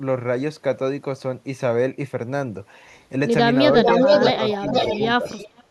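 A far-end echo canceller likely failed to remove its loudspeaker pickup, producing an echo leak from 3.75 to 5.08 s. A copy of the speech returns about 454 ms late and about as loud as the original, so the talk is doubled by a strong, lagging repeat. A second, weaker leak runs from 5.25 to 5.64 s with a similar delay of 457 ms, sitting roughly 20 dB below the speech and heard as a faint trailing shadow.

While the far side's sound plays over the talker, the canceller likely mistook the live speech for echo and turned it down, which is speech suppressed in double talk. Brief dips of about a tenth of a second or less fall at 4.32, 4.59, 4.93 and 5.17 s. Those at 4.32 and 4.93 s are shallow, around 5 dB. Those at 4.59 and 5.17 s are deeper, near 15 dB, so the speech audibly ducks. A final, very deep cut of about 30 dB starts at 5.67 s and runs to the end.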